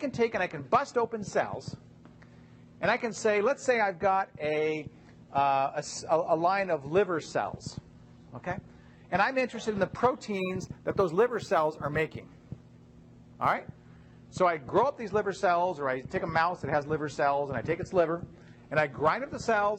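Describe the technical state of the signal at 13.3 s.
Sample clock jitter runs from 10.31 to 13.54 s, covering 13.3 s. The converter clock wanders by a couple of microseconds, so samples land early or late, and steep, loud or bright passages pick up a faint hiss and roughness about 40 dB down.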